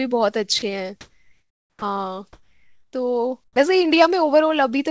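At 0.59 to 0.62 s a 30 ms stretch of sound vanishes into flat noise, sound dropped by the voice detector, likely because it misjudged that moment as background. From 1.01 to 1.82 s the background, about 50 dB below the loudest sound, turns smooth and featureless and shifts by about 2 dB. This is comfort noise in place of the background, likely filling an 810 ms gap in transmission. It closes with an onset clipped by the voice detector: the sound starts abruptly, its first 60 ms (1.76 to 1.82 s) lost, likely because the detector reacted late. The same steady, detail-free background returns at 2.33 to 2.93 s and 3.44 to 3.56 s, at the original level, where the detector likely halted transmission. Throughout, nothing is heard above 8 kHz, which points to a G.722 call path.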